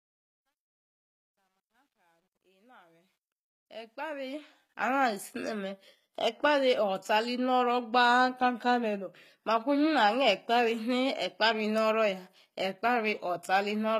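From the start to 5.0 s the fade-in carries truncation distortion on a fade, consistent with about 11 bits and no dither. The quietest stretch, 0 to 3.42 s, sounds gritty. The waveform shows coarse square steps, and the spectrogram shows broadband speckle.

Throughout the clip, plainly audible damage to the speech is likely from HE-AAC compression at a low bitrate near 20 kbps. The treble is rebuilt by copying lower bands upward, so s sounds turn metallic and lispy. The spectrogram shows repeated, misaligned harmonic patterns above the crossover.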